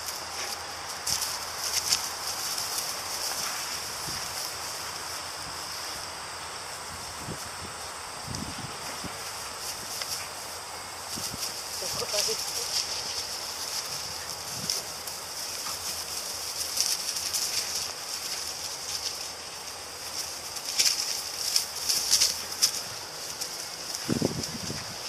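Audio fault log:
9.92, 12.43–12.46, 15.77–15.79, 22.78–22.81 s: compressed frames skipped. The audio jumps ahead by about 100, 50, 50 and 150 ms, roughly two, one, one and three frames of about 46 ms each, missing or rejected by the decoder. Each join shows as a sudden waveform discontinuity and a thin vertical spectrogram seam, heard as a brief blip or click.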